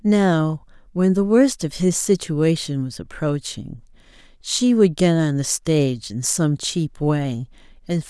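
No technical faults can be heard anywhere in this speech recording. There is nothing to place on a timeline, since no moment stands out as going wrong.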